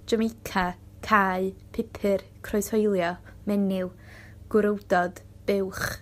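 From 3.70 to 4.42 s the speech runs about 5.4% fast and rises about 92 cents, nearly a semitone, before snapping back to normal. This is likely a drift correction step, where clock-matching software briefly raised the playback rate to drain or refill its buffer. On a spectrogram the harmonic bands step up together for that 0.72 s stretch and then drop back. The waveform looks slightly compressed in time across the same span.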